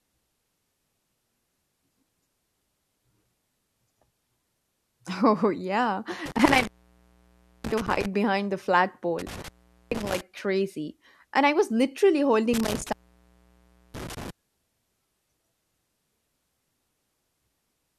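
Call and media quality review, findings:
Intermittent contact, three dropouts: 6.26–8.06 s before "behind the flat" (open 0.97 s), 9.19–10.21 s after "behind the flat" (0.43 s), 12.54–14.30 s after "I was literally" (1.01 s). Crackle at edges, faint hiss between. Loose cable or connector briefly opening the signal path.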